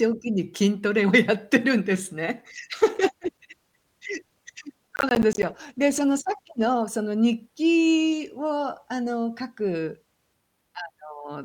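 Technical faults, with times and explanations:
2.55 to 6.91 s, call bitrate drop. The encoder rate falls from 64 kbps to 16 kbps and stays near the bottom for about 4.3 s. With far fewer bits, the speech is coded coarsely. At this low rate the upper frequencies are also trimmed away. The voice turns muffled and watery, losing its crispness. Clarity returns once the bandwidth estimate recovers and the bitrate climbs back up.
4.96 to 5.43 s, processor overload crackle. The processor falls behind and misses a rapid run of audio deadlines. Each missed buffer is replaced by silence, so the sound is punched with tiny hard-edged gaps. The spacing suggests buffers of around 10 ms, with roughly fifteen dropped. Heard together, these gaps form a short gritty crackle riding on the already muffled speech. It stops when the load eases.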